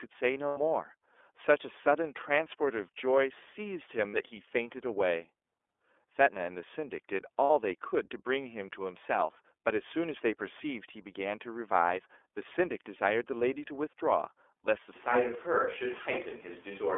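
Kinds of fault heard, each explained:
iLBC codec: The speech passed through a narrowband VoIP codec whose 30 ms frames and 300 Hz to 3.5 kHz band leave it audibly rough, synthetic and muffled.
Lost iLBC frames: Packets went missing, so the decoder filled gaps of 90 ms at 0.48 s and 60 ms at 4.08 and 7.44 s with a held, buzzy vowel-like sound.
Switch to a distant microphone: From 14.96 s to the end the sound turns roomy and hollow with faint background noise, at a similar level, likely because a farther microphone took over.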